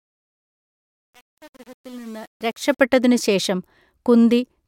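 From 0.0 to 2.81 s the speech fades in with truncation distortion. The gain stage discards low bits without dither, so the quiet start sounds gritty, worst until 2.64 s, which fits an 8-bit path. The waveform shows square steps, and the spectrogram shows broadband hash.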